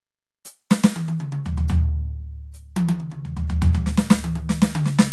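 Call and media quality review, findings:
No faults found in the music carried over the WebRTC call path.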